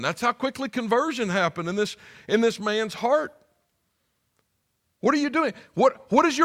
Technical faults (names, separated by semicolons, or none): none